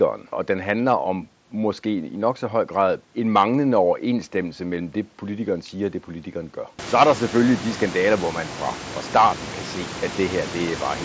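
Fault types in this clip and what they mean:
Nothing here counts as a fault; the roomy background that swells up around the 7-second mark is just the space the microphone sits in, and the band topping out at 8 kHz is simply what the headset link and call processing pass.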